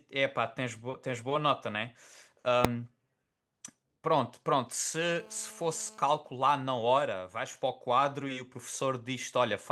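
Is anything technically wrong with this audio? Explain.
Yes, there are three faults.

At 2.65 s, invalid numbers at full scale produce a single bang. A calculation went infinite or invalid and was pinned to maximum amplitude for about 0.67 ms, which fits a 32-sample block. That block is too short to give separate start and end pops.

From 5.03 to 6.13 s there is GSM phone buzz. A nearby 2G phone in a call transmits about 217 times a second, and the audio circuit rectifies those pulses. The result is a steady, raspy 217 Hz buzz rich in harmonics, about 25 dB below the speech and unrelated to it.

From 6.18 to 6.91 s come GSM signalling bursts, heard as even ticks with a longer 217 Hz buzz twice a second. This is a 2G phone in a call, sending only grouped bursts while its user is silent, around 30 dB below the speech. The ticking rhythm sets it apart from the continuous buzz just before.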